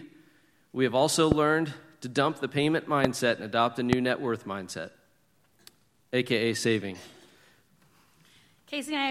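Three loud pops hit the speech, at 1.32 to 1.34 s, 3.05 to 3.07 s and 3.93 to 3.95 s. Each is a single sharp click, somewhere around 20 dB above the voice, which carries on underneath. They're likely electrical spikes from a switch, connector or static discharge.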